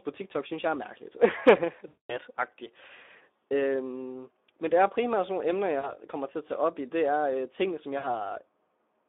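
Speex codec damage runs throughout. The speech is squeezed through a low-bit CELP coder within a 300 Hz to 3.6 kHz telephone band, consistent with a rate near 11 kbps. Too few bits for the excitation leave the voice plainly hoarse, noisy and grainy.

VoIP packet loss concealed by the speech codec occurs at 1.87 to 2.18 s, 5.79 to 6.0 s and 7.97 to 8.06 s. The decoder bridges the missing packets by repeating its last pitch and filter with falling gain. The longest gap smears into a fading buzzy tone or coloured noise, and the shorter two are brief.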